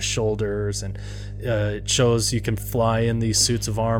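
Mains hum runs under the speech from the first moment to the last, a steady low tone at 50 Hz with some low harmonics, sitting only around 10 dB below the speech. Power-line current is leaking into the signal, through a ground loop or a transformer nearby. Unlike broadband rumble from handling or wind, it holds one fixed pitch and never changes in level, and it lacks the rasping upper harmonics of a buzz.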